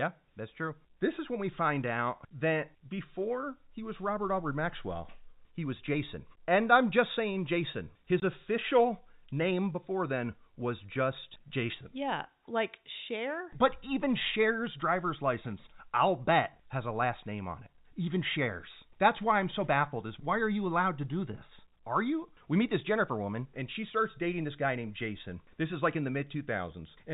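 At 8.2 s the speech drops out for 20 ms. This is packet loss filled with silence. A gap that length fits a single lost 20 ms packet. The receiver played silence in its place. The hole has hard edges. The G.711 telephone coding caps the band at 4 kHz.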